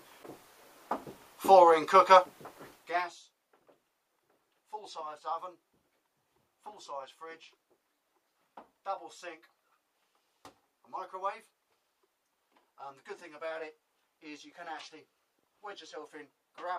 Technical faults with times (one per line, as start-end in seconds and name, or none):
2.70-3.22 zipper noise